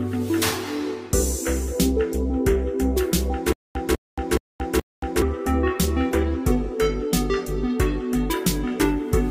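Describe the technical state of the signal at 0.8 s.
At 0.8 s the signal is intact, with no audible fault at that moment.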